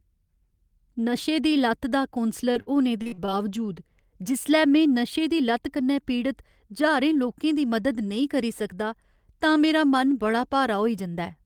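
Repeated packet loss (robotic sound) hits this speech clip from 2.51 to 3.30 s, just after "नशे दी लत्त दा". Short holes, the longest 42 ms, were patched by stretching the previous sound, covering about a quarter of that stretch and leaving it choppy with pieces missing.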